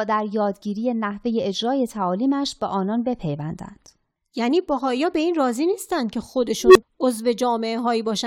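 At 6.63 s an unstable filter diverges: a recursive stage runs away, so a tone near 400 Hz swells over about 120 ms into a loud squeal, then cuts to brief silence.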